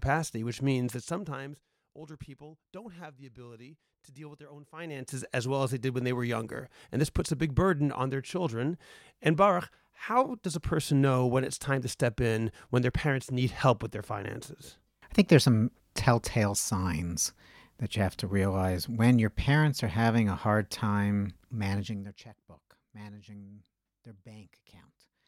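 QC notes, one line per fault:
21.84–22.25 s, zipper noise: just after "having a hard time" the level drops by roughly 20 dB in unsmoothed 1 dB increments, around a hundred steps per second. Each abrupt gain jump leaves a small discontinuity, producing an audible ticking buzz riding on the fade.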